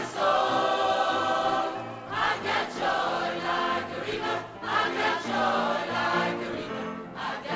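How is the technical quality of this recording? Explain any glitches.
No glitches are audible anywhere in this recording.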